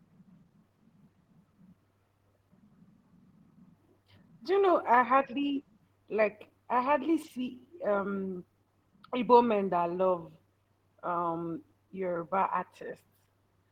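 No technical faults can be heard in this speech recording at any point, and the signal holds steady throughout.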